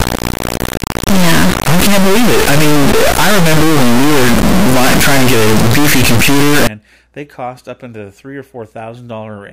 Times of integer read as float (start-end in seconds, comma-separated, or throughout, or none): 0.00-6.67